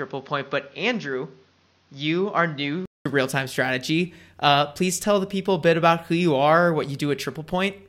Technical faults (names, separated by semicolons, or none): input switched to a poorer device